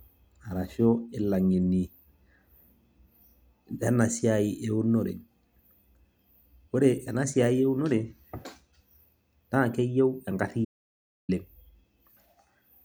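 A speech recording that cuts out abruptly at 10.65 s and stays in complete silence until 11.29 s, a gap of about 0.64 s with no room tone at all before the sound resumes mid-flow. This is an audio dropout to silence: the input was likely lost for that moment, through a disconnected device, failed link or accidental mute, while the recorder kept writing silence, so whatever was spoken in that stretch is gone.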